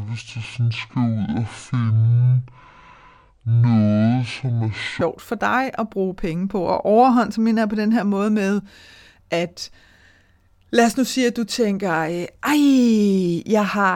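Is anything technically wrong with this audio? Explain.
Yes. From the start to 5.01 s the speech sounds deep, slow and dragging, pitched down by about ten semitones, before snapping back to its natural pace just ahead of "for dig at bruge". This is a section at the wrong speed: that stretch plays at 0.557 times its recorded rate, so pitch and tempo fall together. It was likely caused by an editor or player running that portion against the wrong clock.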